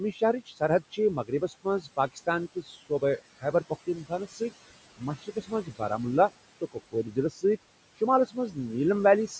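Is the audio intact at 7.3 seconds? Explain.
No. At 7.3 s the audio sits inside a stretch of speech cut by the noise suppressor, running from 6.61 to 7.44 s. The suppressor misjudged part of the speech as steady noise and turned it down with the background, by up to about 18 dB, over roughly 0.4 s in total. Those parts sound swallowed and faint.

Noise suppressor artifacts are present here as well. The background is pulled down by about 20 dB, frame by frame, so the residual noise dips and returns with the speech.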